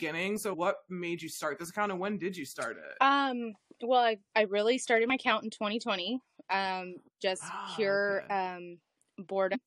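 Damaged data in the compressed stream, at 5.10 to 5.12 s and again at 9.53 to 9.55 s, makes the decoder misread the corrupted frames and lose sync while it hunts for the next valid frame header. Each time, the speech breaks into a brief glitch.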